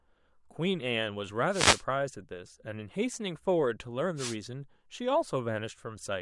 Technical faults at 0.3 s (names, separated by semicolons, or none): none